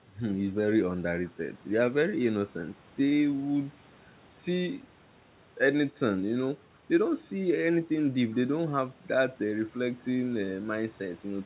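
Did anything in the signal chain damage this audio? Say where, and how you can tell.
No, nothing stood out on listening to this speech, which comes through a call path with no content above about 4 kHz, consistent with a G.711 mu-law codec at 64 kbps.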